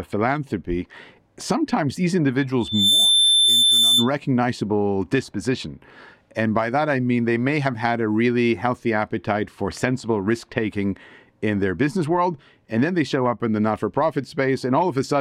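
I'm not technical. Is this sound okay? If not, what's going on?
No. From 2.60 to 4.11 s there is loudspeaker feedback squeal: a microphone is picking up the loudspeaker it feeds, and the sound loops round and grows on itself. Just after "philanthropy sometimes these", a single high-pitched whistle at about 3.5 kHz swells up in a fraction of a second and rings on, a bit louder than the speech, for about a second and a half before it stops.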